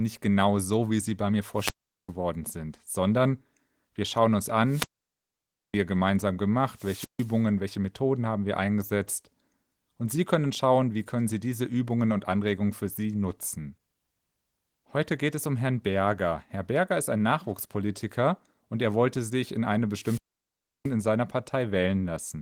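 Four wireless microphone squelch dropouts: at 1.5 s after "wie sie bei mir" (mute about 0.4 s), 4.6 s after "sondern wir schauen uns" (0.91 s), 6.7 s (0.15 s), and 20.0 s after "wollte sich in eine" (0.68 s). Each time the FM signal fades, hiss rises, the receiver's squelch cuts to near silence, then speech returns. The clip also carries light Opus coding.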